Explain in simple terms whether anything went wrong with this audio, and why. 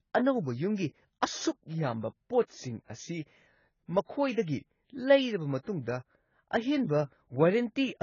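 Something did go wrong, from start to finish. The speech sounds dull, with nothing above 7 kHz, and has a smeared, fizzy texture, especially on hissing sounds. That points to heavy AAC compression as the likely cause. The file was squeezed very small, so fine detail was thrown away.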